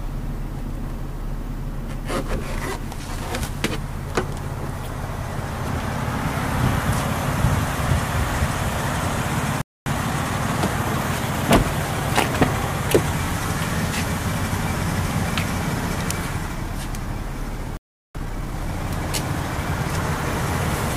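Playback stalls silence the audio at 9.62–9.86 s and 17.77–18.15 s, showing as flat, empty gaps in the waveform, likely because the player ran short of data. Each stall is followed by time-compressed catch-up, at 1.15x until 11.50 s and 1.5x until 18.89 s. The sound is hurried but keeps its pitch. On a spectrogram, the harmonics stay at the same frequencies while events crowd closer together.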